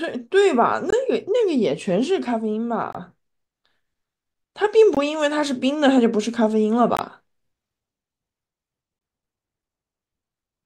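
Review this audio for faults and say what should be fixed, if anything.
The speech has a gap between chunks at five points: 0.90–0.93 s, 2.93–2.95 s, 4.95–4.97 s, 6.97–6.99 s and 8.99–9.01 s. Each hole lasts about 21 ms. They recur every 2.0 s. The audio was split into 2-second chunks, and silence was inserted at each join. Nothing is lost, but the flow breaks. To prevent it, strip codec padding and schedule each chunk to start exactly where the previous one ends.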